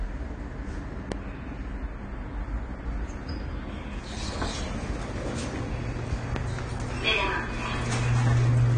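AAC compression runs through the whole clip: nothing is present above about 9.9 kHz, and the damage is plainly audible. The likely cause is AAC-LC coding at a starved rate, consistent with roughly 32 kbps. The encoder quantises each frame's frequency lines against a hearing model, dropping the top band and thinning or noise-filling what remains. The sound comes across dull and smeared, with a warbling, fizzy texture on sustained and hissy parts.

A loud pop hits at 1.12 to 1.14 s, a single sharp click standing about 15 dB above the surrounding sound. A second, harder pop lands at 6.36 to 6.38 s, about 20 dB above the signal. Each is most likely a brief voltage spike, from a switch, connector, static or driver glitch, added to the audio path and shaped by the circuitry after it. The sound carries on underneath both.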